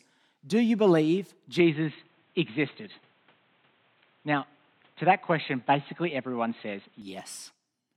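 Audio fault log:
1.59–7.02 s, input switched to a poorer device: after "you believe" the input likely moved to a narrower device, cutting above 4.1 kHz, so speech turns dull and boxy with faint new noise.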